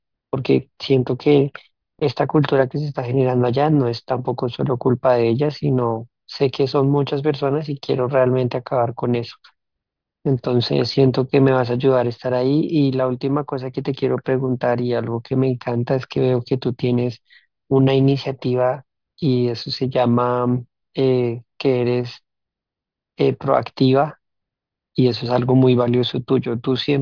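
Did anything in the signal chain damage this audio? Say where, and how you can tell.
No, nothing in the signal chain damaged this audio. Listening through the speech recording, no stage from capture to playback leaves an audible mark on the sound.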